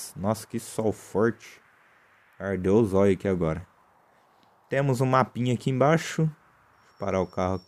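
No technical faults can be heard anywhere in this audio. Nothing in the sound calls for a timestamp or a fix.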